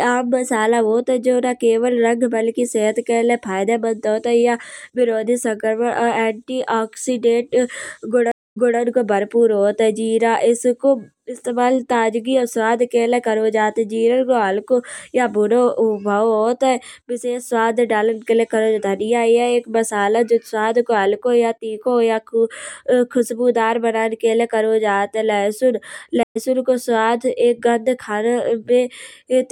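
A stream reconnect occurs twice: the connection dropped and a fresh decoder restarted mid-stream. At 8.32–8.79 s a 247 ms silence ends with the speech resuming 232 ms earlier, repeating audio before "को भरपुर होत है". At 26.23–26.37 s, after "करो जात है लहसून", 122 ms of silence skips ahead about a tenth of a second.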